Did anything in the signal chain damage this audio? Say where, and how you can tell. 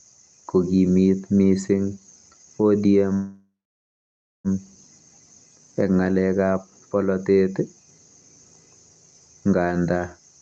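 Yes, at the network and jitter-buffer stage of the call path, most likely a call audio freeze. From 3.13 s to 4.48 s the sound stalls: the last sound is stretched into a fading fill, then roughly 0.93 s of silence, before the audio resumes where it left off. About 1.3 s has been inserted and nothing lost, so the buffer ran dry while packets were late. The audio around it is band-limited to 8 kHz, consistent with Opus at about 32 kbps.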